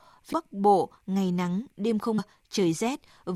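Speech, with damaged data in a compressed stream. Two brief glitches sound at 0.32 s and 2.18 s, the second just after "ngày nắng". Corrupted frames made the decoder lose sync.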